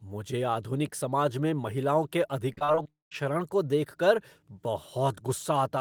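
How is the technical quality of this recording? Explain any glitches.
The recording has a clear network fault in the middle: a run of choppy packet loss that runs into a full dropout, both ending just before "को देख कर".

From 2.53 to 3.16 s, right after "समाज में महिलाओं के", there is repeated packet loss (robotic sound). Seven short holes, the longest 36 ms, are each patched by stretching the preceding sound. About 23% of the span is concealed this way, which gives a choppy texture. Unlike a long dropout, the speech keeps returning between the brief gaps.

From 2.90 to 3.25 s, overlapping the end of that run, the audio drops out. A brief smeared buzz fades into roughly 200 ms of silence, and about 220 ms of audio never returns. That is likely a long network dropout. It differs from the choppy section because it is one sustained hole rather than many small ones, and the speech resumes only at "को देख कर" with the missing part gone.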